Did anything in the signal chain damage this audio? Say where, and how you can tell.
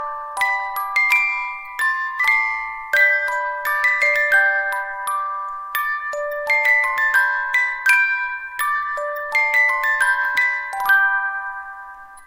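Yes, there's damaged data in the compressed stream at 2.18 s, so the problem sits at the codec or storage stage. You hear a brief glitch there. Corrupted bytes threw the decoder off sync until it caught the next frame header.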